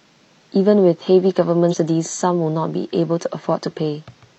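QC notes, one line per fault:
1.68–1.74 s: damaged data in a compressed stream; corrupted frames make the decoder lose sync, giving a brief glitch before it relocks.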